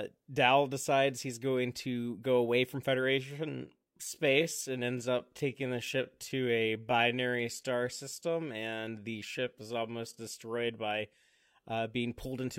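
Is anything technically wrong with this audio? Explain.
Yes, there's a time-stretched section from about 3.53 to 10.23 s. The speech slows abruptly to roughly 0.72 times its pace while the pitch holds, likely from software repeating short slices to fill more time, so it drags.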